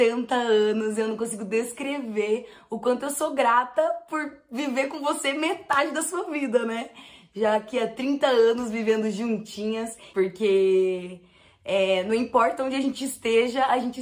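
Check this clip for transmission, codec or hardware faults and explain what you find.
Nothing in this clip points to a transmission, codec or hardware fault. There is no event here to locate or explain.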